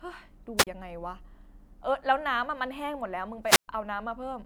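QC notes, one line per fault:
0.57–0.67 s, wireless microphone squelch dropout. The radio signal fades and hiss rises. The receiver's squelch then mutes the output for about 33 ms. That leaves a short hole of near silence before the speech comes back.
3.44–3.68 s, wireless microphone squelch dropout. The same fade happens again, but longer. Static builds, then the squelch closes for about 121 ms. The resulting gap of near silence ends when the signal recovers and the speech resumes.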